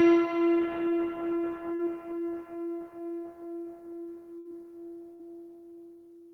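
A short concealed packet loss at 1.75 to 1.81 s in this recording of sounds leaves a brief smear or wobble. About 40 ms of audio never arrived in time, and the receiver bridged the hole by extending the preceding sound for roughly 32 ms before blending back into the real signal. Bursts of packet loss at 4.39 to 4.47 s and 5.13 to 5.21 s are longer. Each time about 60 ms in a row went missing, and the receiver stretched the last sound for around 62 to 64 ms while fading it down, heard as a held, dying buzz or hiss. The audio then resumes further on, with that stretch absent.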